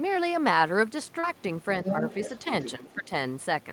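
Throughout the clip, the speech carries a grainy distortion that tracks the signal and is most obvious in quieter stretches and decays, where the sound turns rough and stepped rather than simply noisy. This is low bit depth without dither. The character fits around 9 bits with the samples likely truncated rather than dithered, which leaves an error floor roughly 40 dB below the speech that follows every change in level.

From 1.19 to 1.25 s there is a short concealed packet loss. About 40 ms of audio failed to arrive, and the receiver bridged roughly 36 ms of it by extending the preceding sound before blending back into the real signal. It is heard as a brief smear in the speech at that point.

From 1.83 to 2.03 s, speech is suppressed in double talk. The speech dips by up to about 10 dB, in pieces totalling around 50 ms. The likely cause is the echo canceller pulling level down while the far end was also active.

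Overlapping this, from 1.88 to 2.39 s, the other side's voice leaks through at a fairly strong level, about 5 dB below the main speech. It is residual far-end audio likely picked up from the loudspeaker and not fully cancelled. A second, weaker fragment of the other side's voice leaking through follows from 2.62 to 2.72 s, roughly 10 dB below the speech, with the same likely cause.

From 2.78 to 3.11 s, speech is again suppressed in double talk. This time the dips of up to about 10 dB cover around 300 ms, so the speech dips for most of that span. The likely cause is the same echo-canceller attenuation during simultaneous talk.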